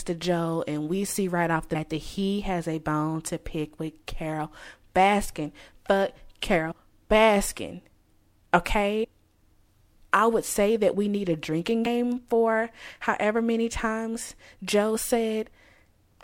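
At 1.74 s, between "see right off the" and "that he has a", compressed frames are skipped. Roughly 150 ms of speech just vanishes, which fits about five frames of around 26 ms each. The same happens at 6.70 s (about 70 ms gone), 9.03 to 9.05 s (about 150 ms) and 11.85 s, between "we need a drinking" and "for however many times" (about 70 ms).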